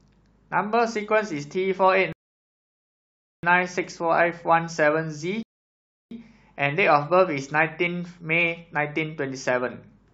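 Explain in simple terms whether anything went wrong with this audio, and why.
The player twice ran out of downloaded audio, a rebuffering stall, so the speech goes silent at 2.13 to 3.43 s and 5.43 to 6.11 s, then resumes exactly where it stopped.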